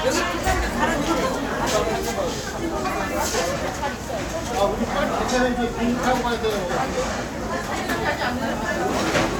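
The signal carries no audible technical faults at any point.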